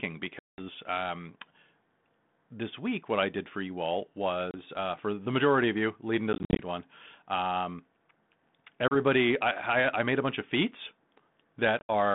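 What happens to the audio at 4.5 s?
At 4.51 s there's packet loss on an ADPCM call: about 30 ms of audio, a few packets, drops to a hard-edged silence. The decoder's predictor and step size lose track of the sender's, so the speech comes back around 4.57 s with some distortion that settles within some tens of milliseconds.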